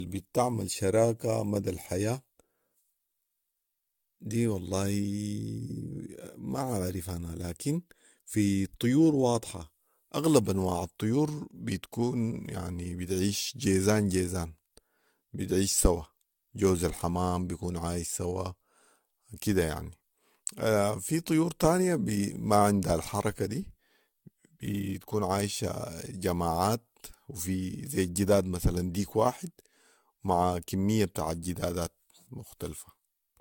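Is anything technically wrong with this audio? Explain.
Yes. Generation loss runs through the whole speech clip: the sound is swirly, smeared and hollow, and consonant attacks are blurred. This is likely from repeated lossy coding, with the audio decoded and re-encoded around five times through an AAC-LC chain near 96 kbit/s. Each pass re-quantises on a shifted frame grid, so noise and spectral holes accumulate. On a spectrogram, nothing appears above 17 kHz, with patchy gaps and smeared onsets below; waveform transients look softened.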